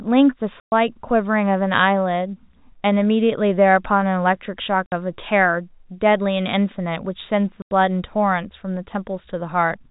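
Packets were dropped and the receiver filled each gap with silence. The speech cuts out for 120 ms at 0.6 s, 60 ms at 4.86 s, and 90 ms at 7.62 s, lengths that fit 30 ms packets. Each hole opens and closes with a hard edge, over the narrow G.711 telephone band.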